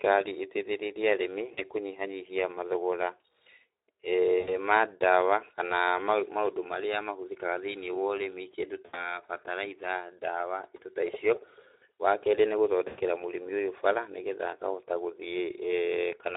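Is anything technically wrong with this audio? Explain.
Yes. The speech is carried by a low-rate Speex codec throughout, and it suffers four dropouts concealed by that codec.

Speex codec: At about 11 kbps, this CELP coder has too few bits to describe the excitation, so it substitutes a coarse approximation of the vocal source. Across the whole clip the damage is plainly audible. The voice comes out noisy and hoarse, and the highest frequencies are reduced to a hissy fill rather than real detail.

VoIP packet loss concealed by the speech codec: Voice packets went missing, and the decoder filled each gap by extending its last pitch and filter settings while lowering the level. The first gap runs from 1.53 to 1.61 s, between "ĩteithĩrĩrie arĩmi" and "kũnyihanyihia mathogora", with about 40 ms lost. The second runs from 4.39 to 4.54 s, with about 80 ms lost. The third runs from 8.85 to 9.18 s, between "ũrĩmi kĩndũ" and "bataraitha ndawa indo ta", with about 80 ms lost. 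The fourth runs from 12.87 to 13.00 s, just before "mũrĩmi ũyũ", with about 100 ms lost. Each gap is heard as a smeared, buzzy tone or coloured noise that fades, and the voice stays weak and distorted briefly after the data returns.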